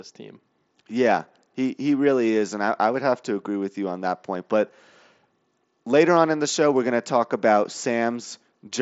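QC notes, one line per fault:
No faults found in this speech clip. The audio runs through a Bluetooth mSBC headset codec link, audible as a wideband top end that stops at about 7.7 kHz with only light coding grain.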